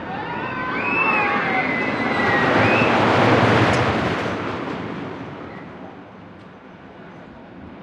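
At 3.74 s a brief glitch cuts into the sound, the mark of damaged data in a compressed stream: corrupted bytes made the decoder misread a frame and resynchronise on the next header.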